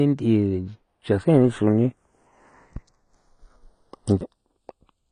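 The two channels come from devices on separate clocks running about 50 ppm apart, so the delay between them slides, reaching roughly 0.3 ms by the end. Summed to mono, comb notches sweep slowly through the spectrum of the speech, heard as slow flanging throughout.

Throughout, nothing reaches above 9.8 kHz, and the damage is plainly audible: the speech sounds dull and smeared, with warbling and fizz on sustained sounds and sibilants. This likely comes from AAC compression, consistent with AAC-LC at around 32 kbps.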